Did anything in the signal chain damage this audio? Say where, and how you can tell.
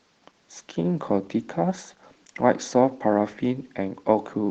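Yes, at the codec stage, throughout the speech. This is Opus voice compression, and the damage is plainly audible: the speech sounds hoarse and faintly robotic. The band is not narrowed, which suggests hybrid operation, with a linear-prediction core handling the range below 8 kHz and a transform layer handling the top. At a low rate, the coarse excitation coding roughens the low band. The overall quality points to roughly 16 kbps.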